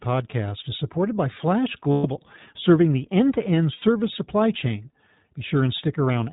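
iLBC codec coding runs through the whole speech clip, with plainly audible damage. The band stops at 4 kHz, so the voice sounds muffled and slightly rough and synthetic. That character fits iLBC's 15.2 kbps mode with 20 ms frames, each coded on its own excitation.

Lost iLBC frames occur from 1.92 to 2.06 s and from 3.74 to 3.84 s. The decoder covers each gap by repeating the last pitch cycle mixed with noise, which produces a held, buzzy vowel. The losses last 120 ms and 80 ms, which fits six and four 20 ms frames. The voice returns to normal almost immediately after each gap.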